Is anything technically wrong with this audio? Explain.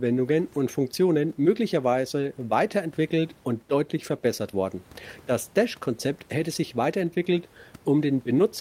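No, the signal shows no technical faults, and the only background present is the room's own noise sitting about 33 dB below the speech, which belongs to the recording space rather than the system.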